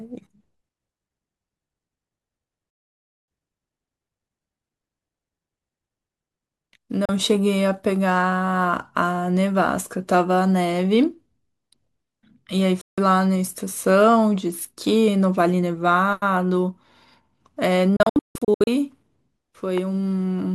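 Speech, and it's got a digital broadcast dropout problem: the receiver keeps muting on bad frames, snapping to silence in about 3 ms. Holes at 2.70–3.28 s, 7.05–7.09 s, 12.81–12.98 s, then a cluster of short gaps from 17.96 to 18.68 s, longest about 0.16 s, all consistent with 32 ms frames being dropped. Right after that there's a loud pop at 19.78–19.80 s, standing a few dB above the speech, which carries on underneath. It's likely a voltage spike from a switch, plug or static getting into the chain.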